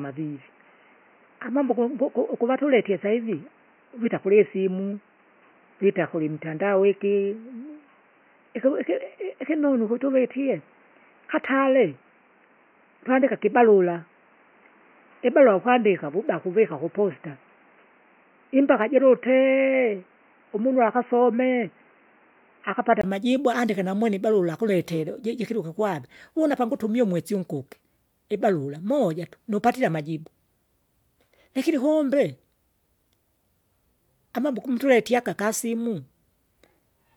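From the start until 23.04 s the speech sounds dull and boxy, with nothing above 3 kHz and a background noise sitting well below it. A brief dropout of about 20 ms then precedes "amajibu andike", after which the sound opens up at much the same loudness. This is likely an input switched to a poorer device: the recording began on a narrowband microphone or headset call profile, then changed back to a wider-range input.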